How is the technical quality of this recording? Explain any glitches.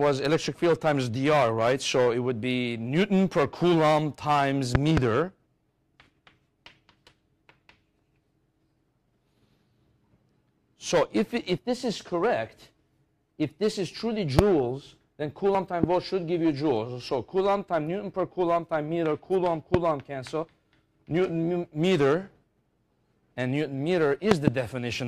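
The recording has a recurring problem with loud pops. There are five events: a double pop from 4.75 to 5.00 s, single pops at 14.39–14.41 s, 15.84–15.86 s and 19.74–19.77 s, and another double pop from 24.31 to 24.50 s. Each one jumps roughly 20 dB above the audio (about 25 dB for the one at 14.39 s), which keeps going underneath. The likely cause is a sudden voltage spike from a plug, a switch or static getting into the signal chain.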